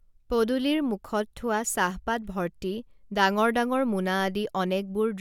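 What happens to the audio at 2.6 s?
Nothing goes wrong at 2.6 s: the speech runs on intact through that moment, with no dropout, click or other fault.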